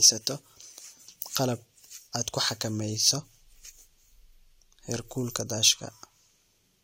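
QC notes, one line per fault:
No faults found on this speech clip.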